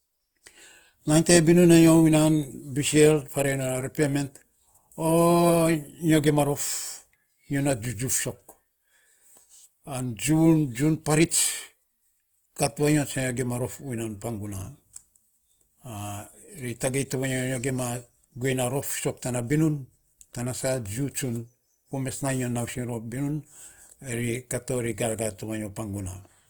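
Throughout the clip, the likely cause is Opus compression running short of bits in its music (CELT) mode, at a rate that fits roughly 24 kbps. The encoder keeps each band's energy but fills starved bands by folding lower ones or with noise, so the speech turns grainy and rough rather than swirly, with a plainly audible noisy texture on sustained sounds. The bandwidth stays full, reaching up to about 20.1 kHz.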